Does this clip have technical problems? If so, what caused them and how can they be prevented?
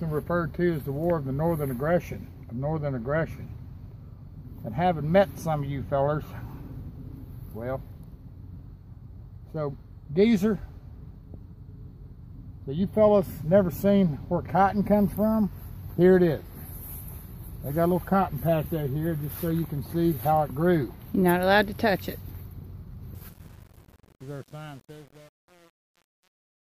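Yes. From 23.15 s to the end at 26.72 s there is truncation distortion on a fade. The fade-out loses its smooth tail and becomes gritty from 23.23 s onward as the level approaches the smallest step. This fits a fade or gain stage holding only about 8 bits with no dither. Keep fades at high resolution and add dither when reducing word length.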